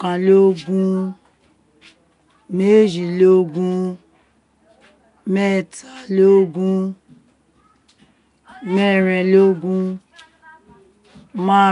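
Nellymoser compression runs throughout the speech and is plainly audible from start to finish. Nothing survives above 10.6 kHz, and a gritty hiss clings to the speech, which sounds blurred and submerged. The likely cause is a block codec starving weak bands of bits and filling them with noise.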